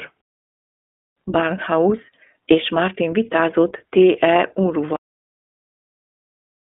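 Speech coded with the iLBC codec, which handles each 20 ms frame independently at a rate that fits its 15.2 kbps mode, leaves a line band of about 250 Hz to 3.5 kHz and a plainly rough, synthetic texture throughout. A cut-off end occurs because the final buffers were never written or played, so at 4.96 s the speech stops mid-sound and drops straight to digital silence with no decay.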